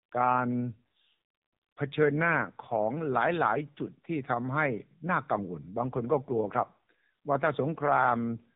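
AMR narrowband mobile codec damage runs throughout this speech clip and is plainly audible. The audio has passed through the AMR-NB phone codec, which samples at 8 kHz, so nothing above 4 kHz survives and the sound is dull and boxy. Each 20 ms frame is rebuilt from a vocal-tract model driven by a handful of pulses. The resulting buzzy, synthetic edge points to a mid-rate AMR-NB mode, around 7.95 kbps.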